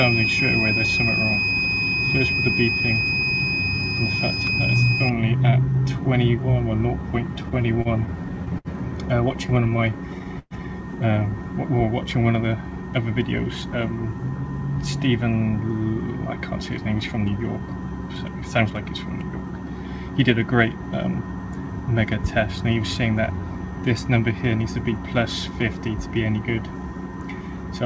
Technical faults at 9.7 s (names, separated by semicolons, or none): repeated stalls (stutter); jitter buffer slow-down